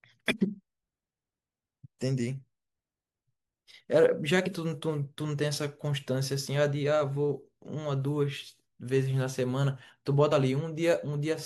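At 10.31 s, compressed frames skipped: one 24 ms frame is lost, so the speech jumps ahead about 20 ms.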